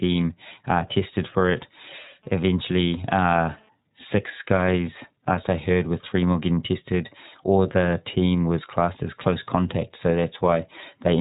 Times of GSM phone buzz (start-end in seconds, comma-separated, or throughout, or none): 2.23-3.69